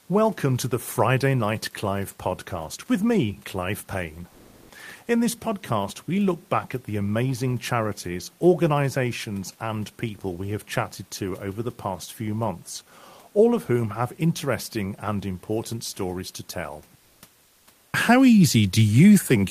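A speech clip with comfort noise in place of the background, twice. From 4.29 to 4.69 s, a 400 ms pause loses its real room noise to a flat, featureless hiss about 6 dB off the true level. From 16.99 to 17.21 s it happens again for 220 ms, with only about a 1 dB shift. The background sits about 40 dB below the loud parts. The likely cause is Opus DTX: the sender went quiet and the receiver synthesised filler noise.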